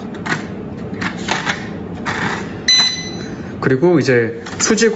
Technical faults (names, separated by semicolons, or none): gain pumping